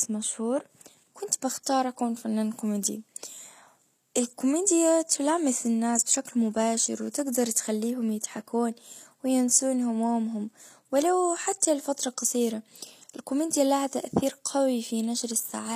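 Throughout, s sounds are gritty and nothing remains above 14.9 kHz. The likely cause is HE-AAC compression at a low bitrate, rebuilding the treble from copied lower bands.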